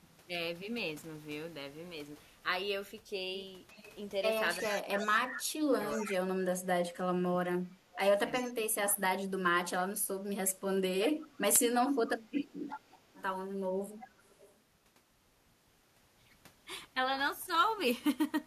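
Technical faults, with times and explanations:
3.74–3.95, 4.63–5.08, 5.83–6.17, 7.95–8.53, 10.47–11.38, 12.69–13.23 and 13.98–14.55 s: echo leak. A delayed copy of the speech trails the original by a steady 355 ms. It sits anywhere from about 25 dB down near 3.8 s to about 10 dB down around 4.6–6.2 s. The likely cause is a far-end loudspeaker whose echo canceller is not fully removing what its microphone picks up, so the residue is sent back as these short scraps.
4.69–9.01 s: speech suppressed in double talk. Across this span the speech is turned down, for around three seconds in total, with the deepest drops roughly 20 dB. It overlaps the echo bursts at 4.63–6.17 s and 7.95–8.53 s. The likely cause is an echo canceller that could not separate the local talker from loudspeaker echo while both sides were active, and so attenuated everything at once.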